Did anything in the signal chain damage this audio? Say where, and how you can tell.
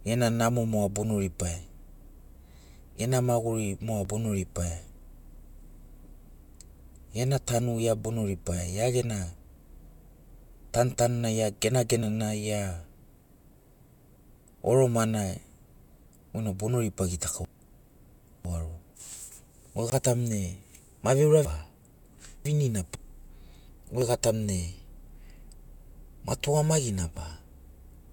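Yes, three separate problems, all in the digital side of the chain.

The regular ticks are an overlap between stream segments, from the streaming or playback stage. You get tiny skips at 4.05, 8.05, 12.03, 16.02 and 24.02 s, each losing only about 5 to 12 ms. That every-four-seconds rhythm is the giveaway: the stream comes in 4 s segments whose timestamps overlap slightly, and the player trims the supposed duplicate, which was really fresh speech, so the waveform jumps.

Then there are chunks out of order, a network or storage reassembly fault. Between 17.45 and 18.95 s, and again between 21.45 and 22.95 s, the speech goes jumbled. It sounds like a 500 ms chunk landed two chunks late and got played after the audio that should have followed it. Nothing's actually missing, just shuffled, which is why it sounds garbled rather than gappy.

Last, a block of digital silence, most likely from the driver or buffer stage. 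There's a 20 ms hole from 19.90 to 19.92 s, heard as a short dropout, and a much smaller one of about 3 ms at 27.17 s that comes across as a single tick. The audio drops straight to silence and back with no fade, which fits an output buffer that wasn't filled in time.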